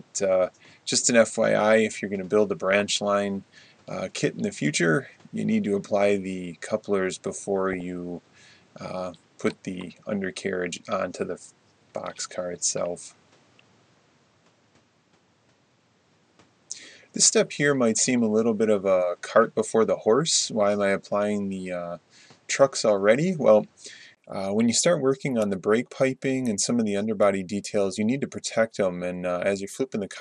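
The whole clip has a dull, gurgling, granular quality with coarse upper bands, likely from MP2 compression at a low rate, fitting around 80 kbps. From the start to 24.17 s the audio is band-limited, with nothing above 9 kHz and added noise about 40 dB down. That points to a likely input switched to a poorer device, with a 20 ms gap at the switch. DAB burbling appears as brief noise blips in single sub-bands at 2.78 to 2.80 s and 7.72 to 7.81 s, from bit errors in the data.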